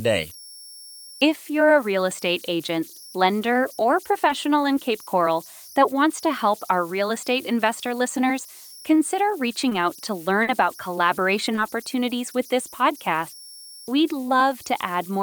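Throughout, converter idle tones give a whistle near 5 kHz, about 23 dB below the speech: an undithered converter cycling through fixed bit patterns, not steady hum or broadband hiss.

Short concealed packet loss comes at 4.27 s after "estate agent lender or", at 9.69 s, at 10.43 s between "out to" and "about collaboration opportunities with" (the longest), and at 11.55 s between "about collaboration" and "opportunities with this podcast". Each time the receiver extrapolated the last sound, leaving brief smears rather than the clean silent holes of a dropout.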